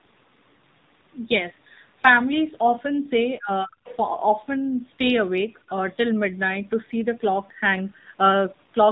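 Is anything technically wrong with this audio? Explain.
Yes, there are three faults.

Throughout, the speech carries the sound of the AMR narrowband mobile codec. Nothing above 4 kHz survives, and the buzzy, synthetic vocal-tract rendering is plainly audible. That points to a low AMR-NB mode, around 7.4 kbps, where too few pulses per subframe are available to model the voice.

From 3.39 to 3.89 s, the talker's voice sinks steeply, by a very deep amount, for most of that half second. This is likely speech suppressed in double talk: with both ends active, the echo canceller could not tell near speech from loudspeaker echo and attenuated both.

From 3.87 to 3.96 s, a brief fragment of another voice comes through well below the talker's level. This is the other side's voice leaking through, likely because the echo canceller left residual loudspeaker pickup in the microphone signal.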